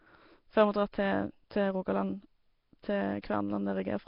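Throughout, the speech sounds smeared and underwater, with hiss filling the starved bands and nothing above 5.3 kHz. That's likely heavy Nellymoser compression.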